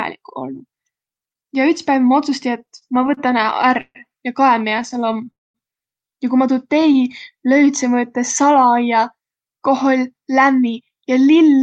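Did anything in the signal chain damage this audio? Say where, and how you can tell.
Yes. The damage happened at the network and the receiver's jitter buffer on a speech call. From 2.59 to 3.97 s there are repeated stalls (stutter). Packets kept arriving late, the buffer ran dry 17 times, and the receiver stretched the last sound to cover about 335 ms, roughly a quarter of that span. The longest hold is 140 ms. Nothing is lost, but the speech lurches and drags.

The same stutter pattern comes back in two shorter runs. From 4.65 to 5.28 s there are 11 gaps, each 16 ms or less, filling 116 ms in total. From 6.77 to 7.15 s there are 5 gaps of at most 15 ms, adding 35 ms. In both runs the receiver kept repeating the preceding sound until packets caught up, so the speech sounds choppy rather than clipped, with nothing actually missing.

At 5.30 s the audio stops in a call audio freeze lasting until 5.56 s. 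The likely cause is packets held up in transit long enough to empty the buffer completely. The receiver bridged 240 ms, and after a brief continuation about 210 ms of it is silence. The speech then resumes exactly where it left off, so the whole call now runs about 240 ms later than before.

From 6.73 to 8.47 s a jitter buffer slow-down sets in. To rebuild its reserve, the receiver repeated single pitch periods and slivers of pauses many times in a row. Over that stretch it inserted 125 ms, so the speech plays at about 93% speed with unchanged pitch. Sounds are slightly drawn out and the delivery feels sluggish.

From 10.14 to 11.57 s the opposite happens, a jitter buffer speed-up. The buffer was holding more audio than its target, so the receiver trimmed short pieces of one or a few pitch periods, removing around 150 ms in all. The speech runs at about 110% speed at the same pitch, and the end of the clip sounds hurried.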